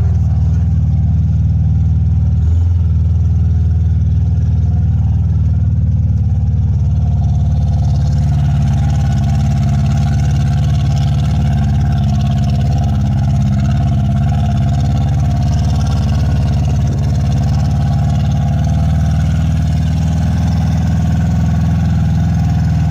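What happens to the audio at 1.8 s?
Nothing goes wrong at 1.8 s; the audio runs through that moment intact, with no dropout, click or distortion.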